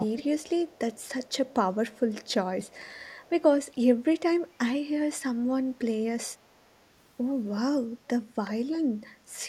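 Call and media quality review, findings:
Speech suppressed in double talk, 0.00–0.18 s: level dips about 35 dB for about 200 ms. Likely echo canceller attenuating during double talk. Waveform shows a near-flat gap.

Echo leak at 0.16–0.25, 0.73–1.33, 1.92–2.28, 2.67–3.42 and 8.45–8.50 s: faint copy 372 ms late, about 15 to 35 dB down. Likely residual loudspeaker echo escaping cancellation. Spectrogram shows faint, shifted repeats of the speech.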